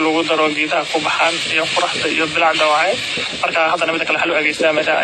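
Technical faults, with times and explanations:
Throughout: transcoding between lossy codecs. Mixed artefacts from several codecs overlap, and nothing reaches above 12.8 kHz, which likely fits repeated lossy re-encoding ending in AAC-LC.
3.12 to 5.03 s: time-stretched section. The speech suddenly runs about 1.56 times faster at unchanged pitch, sounding rushed, likely from software dropping short pieces to shorten it.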